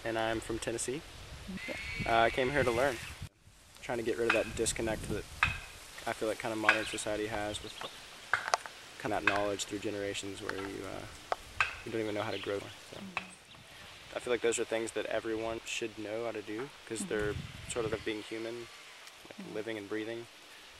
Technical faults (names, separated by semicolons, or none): damaged data in a compressed stream